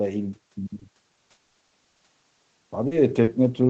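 Speech recorded over a call whose packets repeatedly failed to reach the decoder in time, with nothing above 8 kHz, which fits a wideband call codec. Short concealed packet loss strikes three times, at 0.79–0.83 s (about 20 ms missing) and at 2.87–2.93 s and 3.23–3.29 s (about 40 ms each). In each case the receiver bridged the hole by extending the preceding sound, carrying on its pitch or its noisy texture before rejoining the real signal. These patches come across as brief smears or wobbles where a short sound can drop out. Between 1.31 and 2.01 s the trouble escalates into repeated packet loss with a robotic sound. Six separate gaps, the longest 100 ms, add up to about 300 ms of missing audio, so 43 percent of that stretch is concealment rather than real signal. Because each synthetic fill barely ends before the next gap begins, the speech turns choppy, with fragments missing.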